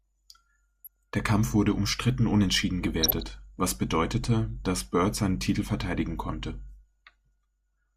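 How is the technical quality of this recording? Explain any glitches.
The speech is marred by two brief glitches. DAB burbling occurs at 0.84–0.97 s and 3.02–3.22 s, the latter between "wurde umstritten unentschieden" and "was bedeutete dass". A small residue of bit errors slips past error correction and corrupts MP2 sub-band values, producing short blips of noise in single sub-bands.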